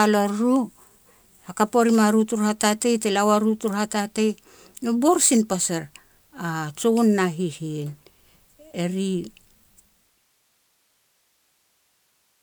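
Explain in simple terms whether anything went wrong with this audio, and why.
Nothing went wrong; a gentle fade-out ends at 10.4 s.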